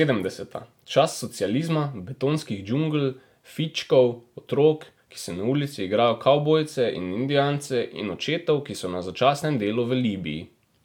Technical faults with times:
none

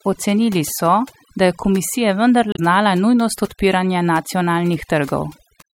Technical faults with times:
0.00-5.75 overdone noise removal
2.52-2.59 damaged data in a compressed stream
5.58-5.62 damaged data in a compressed stream

